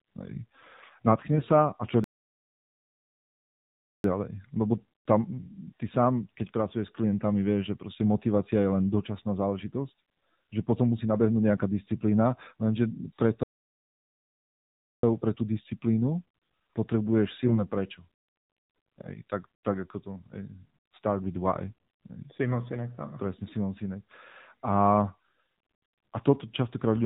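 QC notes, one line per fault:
throughout, AMR narrowband mobile codec: the speech has been squeezed through AMR-NB at 7.4 kbps, so nothing above 4 kHz survives and the voice comes out thin, a bit buzzy and synthetic, because the low bitrate leaves the vocal-tract model only a handful of pulses per subframe.
1.32–1.43 s and 17.45–17.58 s, AMR bit errors: two short bursts where the voice turns hoarse and gargly while pitch and level hold, the first just before "sa a". Around 4 percent of the weakly protected bits got flipped, misplacing the excitation pulses and nudging the finer gain and spectral values.
2.04–4.04 s and 13.43–15.03 s, playback stall: the audio drops to silence mid-flow for 2 s, then about 1.6 s, the second right after "disciplína lenže pre" and resuming with "pre tú disciplínu". It picks up where it left off, likely the player starving for data or its thread getting blocked.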